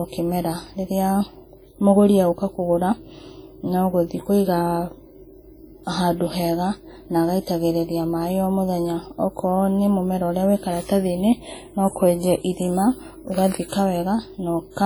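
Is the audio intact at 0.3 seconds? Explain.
No. Heavy WMA compression runs through the whole clip. Smeared quantisation noise gives a ringing, washy sound with breathing hiss, likely from encoding at about 32 kbps.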